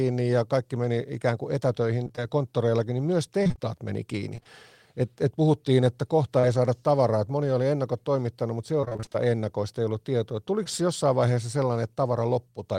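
It's a speech recording with packet-loss trouble. Repeated packet loss gives a choppy, robotic sound at 2.03–2.19 s, at 3.43–3.59 s between "konttoreillakin niin myös" and "meni kiinni", and at 8.81–9.30 s; about half of each stretch is patched-over gaps of roughly 20 ms. Short concealed packet loss shows up as brief smears right after "meni kiinni" at 4.35–4.47 s (three back-to-back 20 ms drops), then at 6.39–6.45 s and 10.64–10.68 s.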